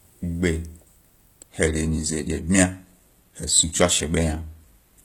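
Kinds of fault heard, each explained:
Adaptive stream at a lower bitrate: when the connection slows, the player switches to a leaner version of the speech stream, and from 1.49 s to the end the quality drops abruptly with no gap. The sound points to a move from about 96 kbit/s AAC-LC to roughly 20 kbit/s HE-AAC. On a spectrogram the content above 14.9 kHz disappears at that moment, while the waveform continues unbroken.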